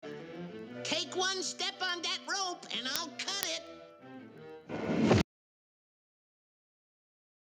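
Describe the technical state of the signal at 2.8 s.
At 2.8 s the signal carries word clock ticks, which run from 0.12 s to 7.57 s. An unsynchronised receiving clock, off by a couple of hundred parts per million, slips one sample about ten times a second. Unlike random clicks, these ticks recur at a steady rate.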